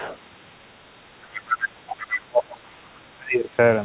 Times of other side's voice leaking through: 0.00-0.16, 1.32-2.22

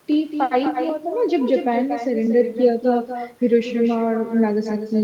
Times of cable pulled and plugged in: none

